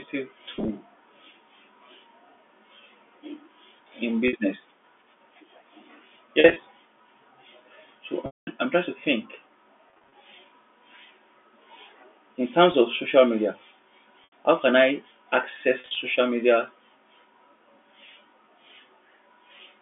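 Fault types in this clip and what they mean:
Packet loss with pitch repetition: at 0.55, 4.28, 6.4, 8.26, 9.9 (after "I'm trying to think"), 12.72, 14.24 and 15.8 s, audio packets go missing and the receiver fills each gap by repeating the last pitch period. The brief 20 to 50 ms losses sound like a held, buzzy tone, while the 210 ms dropout at 8.26 s fades to silence before the sound cross-fades back. The gap sizes fit 10 ms packets.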